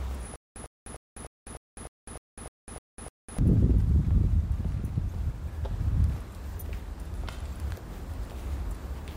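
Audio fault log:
0.36–3.39 s: stutter with silent gaps. A 100.65 ms burst repeats 10 times every 302.88 ms, with 202.23 ms of digital silence between, likely from a stalled stream replaying its last fragment.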